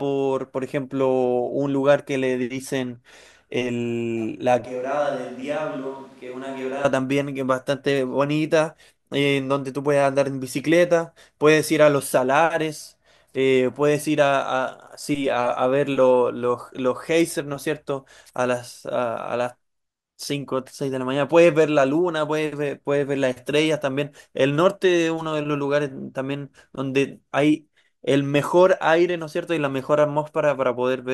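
From 4.65 to 6.84 s speech turns hollow and roomy, likely a switch to a distant microphone; waveform drops about 10 dB, spectrogram loses bass.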